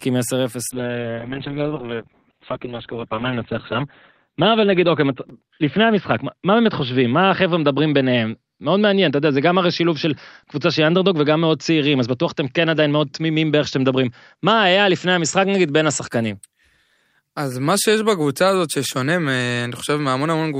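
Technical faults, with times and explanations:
0.73–16.15 s, call bitrate drop: speech turns coarse and muffled, with the top end cut from 20 kHz to 4 kHz, consistent with roughly 48 falling to 6 kbps.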